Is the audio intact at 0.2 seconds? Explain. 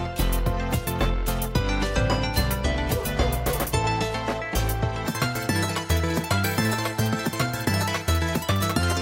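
Yes, the audio is intact at 0.2 seconds, with no audible fault at that moment.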